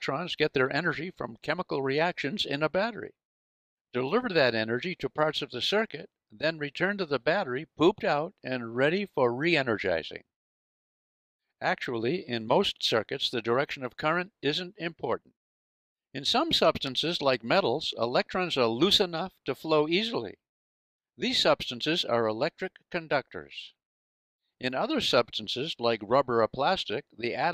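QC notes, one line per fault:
16.87 s, dropped samples: one sharp click as the waveform jumps abruptly, likely from a fraction of a millisecond of missing samples.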